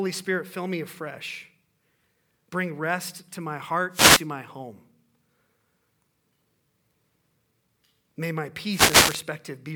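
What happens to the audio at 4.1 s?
From 3.9 to 4.27 s, just after "rest to my" and before "my home", there is a wireless microphone noise hit. The FM radio signal fades as reflected paths cancel, so receiver noise surges up as a short burst of static.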